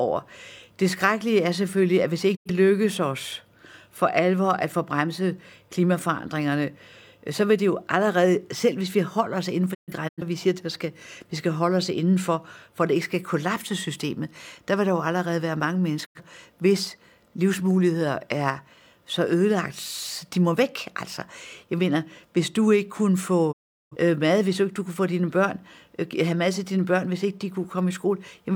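The speech drops out four times, each a digital broadcast dropout, where the receiver mutes after losing good frames and resumes later. At 2.35 to 2.51 s and 16.04 to 16.21 s about 85 ms goes silent, which fits two lost frames. From 9.73 to 10.23 s the loss is scattered into short holes over 427 ms, the longest 128 ms. At 23.51 to 23.96 s a 384 ms gap opens. Each edge fades over 20 ms, and the missing sound never returns.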